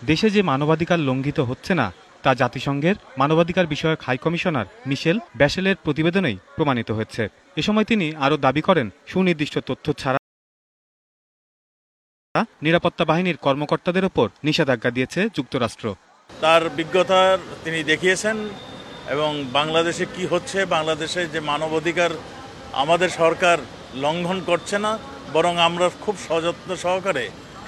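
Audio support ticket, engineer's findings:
Rebuffering stall, 10.17 to 12.35 s: audio drops to silence for about 2.2 s, then picks up right where it left off. Player buffer ran dry waiting on network data. Nothing lost, just time added.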